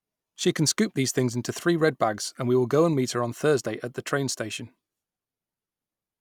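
Nothing in the recording trips up the ear: no technical faults turn up anywhere along the way.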